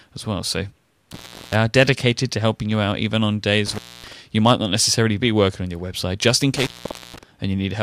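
A loose connection in the signal path keeps opening and closing, an intermittent contact fault, at 1.12 to 1.56 s, 3.66 to 4.13 s and 6.57 to 7.23 s. Each time the circuit breaks, the speech drops out for about 0.35 s, 0.26 s and 0.48 s respectively. Only a faint hiss remains while the line is open, and a crackle marks the edges of each gap as the contact breaks and then remakes.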